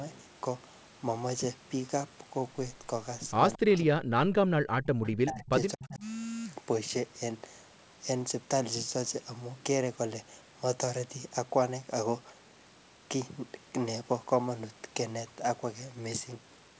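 From 3.56 to 4.87 s the speech sinks in chunks, deepest by about 40 dB, likely speech suppressed in double talk: the echo canceller, facing both sides at once, turned the near talker down with the echo. The waveform shows hollowed, ragged stretches, and the spectrogram shows energy blanking out across the band.

At 5.03 to 5.1 s a brief echo leak slips through, likely because the canceller missed part of the loudspeaker pickup. It is a faint copy about 240 ms behind, roughly 20 dB down, and shows as a weak smear trailing the original.

The suppression returns from 5.22 to 5.55 s, at its deepest about 35 dB down, and again from 5.73 to 6.04 s, more shallowly, around 25 dB. Both show as short notches in the envelope with faded spectrogram columns.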